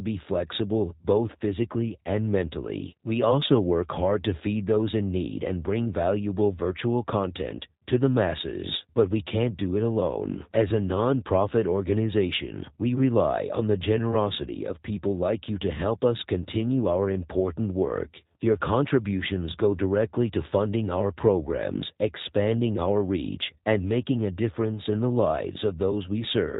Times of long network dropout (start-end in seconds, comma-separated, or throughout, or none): none